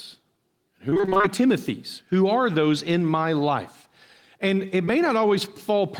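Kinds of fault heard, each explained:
Repeated packet loss (robotic sound): From 0.89 to 1.25 s the speech turns choppy, as holes arrive one after another and each is patched by stretching the sound just before it. The pattern points to around nine separate losses, none much longer than 23 ms, with about half of that stretch made up of filled-in sound. The repetition within one short span is what separates it from a single loss.
Short concealed packet loss: At 4.85 to 4.89 s roughly 20 ms of speech never arrived, and the gap was bridged by continuing the preceding sound before blending back into the real signal. It comes through as a brief smear or wobble rather than silence. It is one isolated event, so there is none of the sustained robotic chopping heard earlier, and it is too smooth to be mistaken for a hard digital click or a true dropout.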